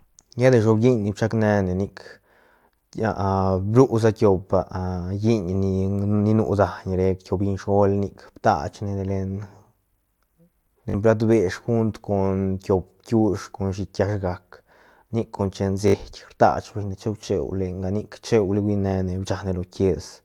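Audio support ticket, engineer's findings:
Bluetooth stutter, 10.90–10.94 s. Brief buzzy repeat, about 40 ms of sound missing, playback resuming ahead as though it had kept running. Fits two lost or late packets on the wireless link, with the receiver replaying its last buffer. Same stutter at 15.88–15.94 s, about 61 ms missing, consistent with three lost packets. The waveform would show identical short segments tiled end to end, then a discontinuity. The spectrogram would show regular vertical striping across the gap.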